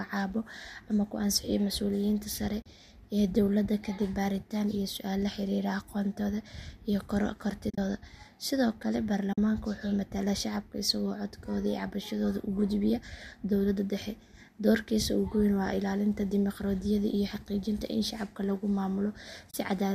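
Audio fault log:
2.62 s, 7.70–7.78 s, 9.33–9.38 s, 19.51 s: AAC frame loss with muting. The speech drops into brief soft-edged silences, roughly 30 to 80 ms long, because overlapping windows fade the zeroed frames out and back in. The 7.70 s gap is broken up rather than one clean hole, and the lengths fit the roughly 10 ms frames of the low-delay AAC that likely carries this speech.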